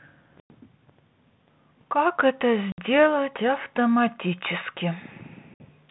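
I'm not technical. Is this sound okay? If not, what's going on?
No. The speech has three short holes of packet loss on an ADPCM call, at 0.40 to 0.51 s, 2.72 to 2.79 s and 5.54 to 5.66 s, the first about a tenth of a second long and the others shorter. Small chunks of the call never arrived and were filled with silence. What sets this apart from an ordinary dropout is the recovery. This phone-style coding predicts each moment from the last, so after each gap the speech comes back briefly with some roughness, then settles.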